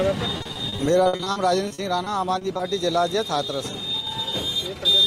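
From 0.37 s to 2.61 s the sound breaks up repeatedly, a clear case of repeated packet loss with its robotic sound. About twenty holes open in quick succession, the longest about 60 ms. Each is patched by extending the preceding sound, so around 500 ms is filled with stretched material, roughly a fifth of the stretch, and about 300 ms is simply missing. Unlike a single dropout, the choppiness recurs densely, with repeated patching rather than clean silent gaps.

At 4.00 s the level sinks abruptly by about 6 dB and recovers 65 ms later, at 4.07 s. This is likely one channel dropping out: once the stereo pair is summed to mono, losing one side halves the shared content, giving exactly that step, while anything carried only by the lost side vanishes. A full dropout would go silent, and a gain ride would ramp. This is a brief, flat, hard-edged dip.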